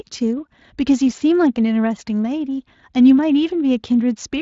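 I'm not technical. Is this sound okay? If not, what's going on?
Yes, this sound is okay: there's nothing wrong with it that needs explaining.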